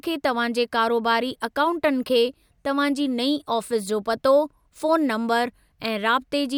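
A speech recording, with nothing technically wrong to be heard anywhere in it. No fault turns up at any point, so there are no times or causes to give.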